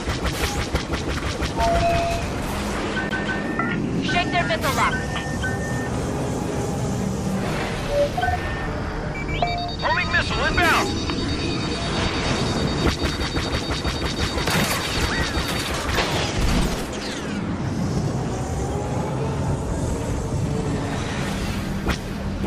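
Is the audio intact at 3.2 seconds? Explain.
No. At 3.2 s the CD is stuck on one turn: a scratch keeps knocking the laser back one track, so from 3.09 to 3.41 s a 160 ms slice of sound plays twice over. Each jump leaves a brief mute, giving a quick, even skipping-disc stutter.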